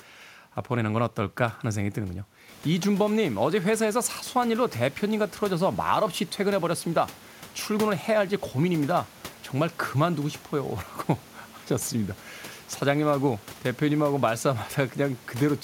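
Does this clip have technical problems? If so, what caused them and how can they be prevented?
No, the speech signal has no technical problems, and the background noise of the room, which rises by about 13 dB at roughly two and a half seconds in and then stays about 25 dB below the speech, belongs to the recording environment rather than to any fault in the system.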